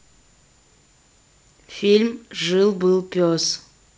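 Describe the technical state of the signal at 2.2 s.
At 2.2 s the speech is intact, carried cleanly through G.722 wideband telephone coding at 64 kbit/s with no fault present at that moment.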